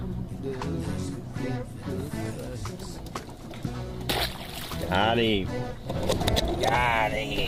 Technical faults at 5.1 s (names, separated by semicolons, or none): none